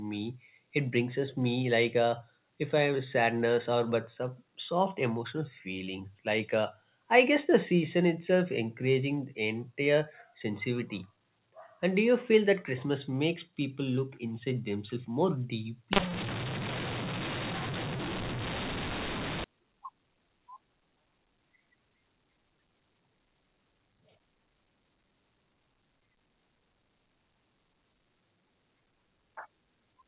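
From 15.93 to 19.44 s there's a mu-law and A-law mix-up: A-law telephone samples get read back as mu-law. That scrambles the levels, so the speech turns harsh and distorted and the pauses fill with noise.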